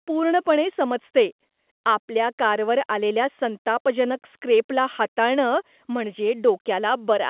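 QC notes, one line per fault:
Nothing stood out on listening to this speech.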